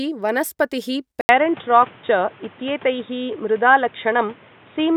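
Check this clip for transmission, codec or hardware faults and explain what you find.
One hardware fault is present: at 1.21 s the input appears to switch to a poorer device, likely a different microphone or a headset's call profile, and it stays there to the end. The changeover leaves a gap of about 80 ms. From then on, the new path passes nothing above 3.8 kHz, so the speech turns dull and boxy. A faint new background noise sits well below the speech, while the overall level stays about the same.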